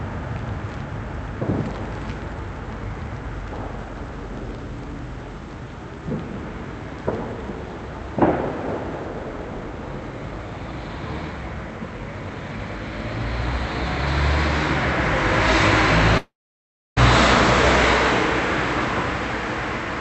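From 16.17 s to 16.98 s the sound breaks off. The last moment is stretched into a buzz or hiss that fades away, and about 0.66 s of silence follows before the audio resumes further on, with roughly 0.8 s of material simply gone. This is likely a long network dropout: no packets arrived, so the receiver filled the gap by continuing the last sound and then gave up. The Opus call path, limited to 8 kHz, carries the audio on either side.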